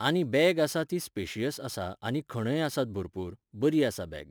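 Crude rate conversion runs from start to finish. The sample rate was raised by a ratio of about 1.09 by repeating the nearest existing sample instead of filtering, which fits a conversion from 44.1 kHz to 48 kHz. The repeats fall in a regular pattern set by the two rates, producing inharmonic tones roughly 25 dB below the speech. They sound like a gritty fizz that rides on louder and brighter syllables.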